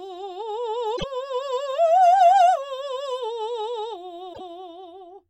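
A likely broken MP3 bit reservoir disrupts this music clip twice: frames appear to have gone missing, so the frames after each gap reach back for borrowed data and decode bytes that belonged to other frames. The music skips ahead and then garbles for about 84 ms, roughly three 26.1 ms frames, from 0.96 to 1.04 s and again from 4.33 to 4.41 s, before clean playback resumes.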